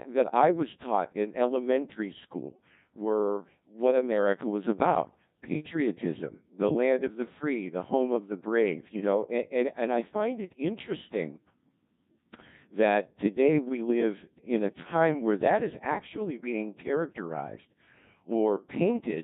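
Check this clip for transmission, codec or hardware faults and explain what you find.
One codec fault runs through the entire recording. From start to finish the speech sounds robotic and buzzy, heavily damaged, with a synthetic hum in place of natural vocal texture. That is the Codec 2 vocoder at work, at a coarseness which fits its 1.6 kbit/s mode. Rather than preserving the waveform, it transmits only pitch, voicing, energy and a rough spectral envelope, and the decoder rebuilds the voice from sine waves.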